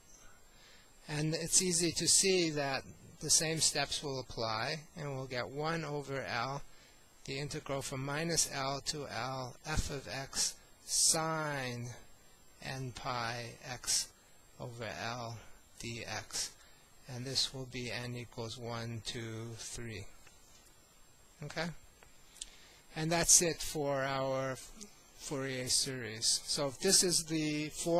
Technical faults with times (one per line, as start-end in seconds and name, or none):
none